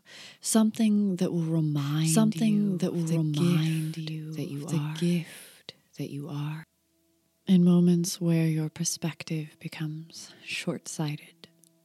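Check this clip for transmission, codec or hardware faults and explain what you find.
A doubled audio track runs from 1.78 s to 6.64 s. The likely cause is a second capture through a slower path, mixing in a copy about one and a half seconds late at roughly equal level, so the sound repeats itself cleanly, with no decay, and cuts in and out abruptly.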